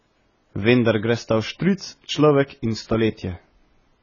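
From start to finish the speech sits under heavy codec damage, likely from AAC compression. Nothing is present above 7 kHz, so the top octave is missing and consonants lose their edge. The encoder has clearly been starved of bits, which fits a rate around 16 kbps. With too few bits, coarse quantisation leaves gaps in the spectrum, and these come through as a dull, smeared sound with a warbling, fizzy texture on held vowels and sibilants.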